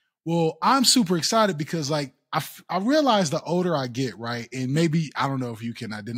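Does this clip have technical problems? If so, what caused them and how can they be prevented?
No, nothing technical stands out in this one, so there's no fault to explain and nothing in particular to guard against.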